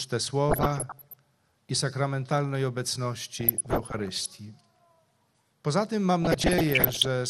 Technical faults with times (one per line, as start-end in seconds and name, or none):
0.00-7.29 MP2 compression
0.49-1.14 DAB burbling
3.39-4.28 DAB burbling
6.22-7.07 DAB burbling